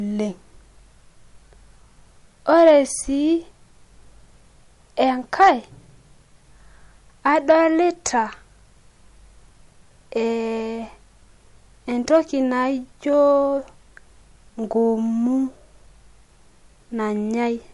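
MP3 compression, throughout the 18 s: nothing is present above 11.3 kHz, and the speech sounds watery and swirly, likely from MP3 encoding at a low bitrate, around 48 kbps.

Hard clipping at 2.54–2.71 s, 5.41–5.50 s, 7.27–7.53 s and 12.14–12.17 s: peaks overrun the signal path by about 2, 4, 3 and 2 dB, and are sliced flat into brief crackly distortion.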